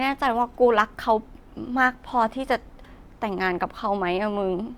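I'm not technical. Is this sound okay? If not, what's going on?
Yes, the speech sounds fine, with nothing going wrong.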